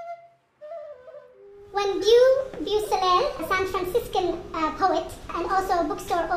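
Wrong sample rate runs throughout the clip: everything plays 1.38 times too fast and about 5.55 semitones sharp, with pitch and tempo raised together and nothing resampled. The sound is high and hurried, which fits 32 kHz material played back at 44.1 kHz.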